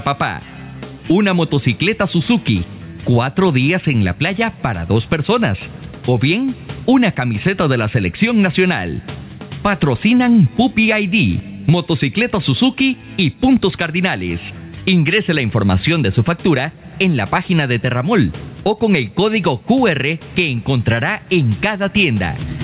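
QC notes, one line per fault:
Throughout: gain pumping. The gain swings by around 15 dB. This likely comes from excessive gain driving a fast limiter.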